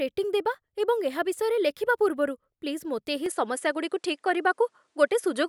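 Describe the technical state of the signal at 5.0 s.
At 5.0 s the speech is band-limited, with nothing above 11.3 kHz, from 3.26 s to the end, most likely because the input switched to a poorer device. The change arrives without a gap or level jump, dulling the top end and adding a faint noise floor roughly 50 dB down.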